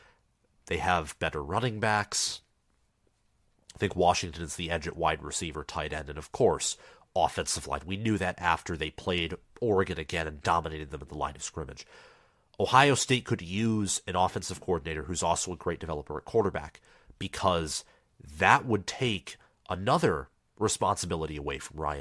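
No technical faults can be heard anywhere in the speech. There are no events to place in time, so no times are given.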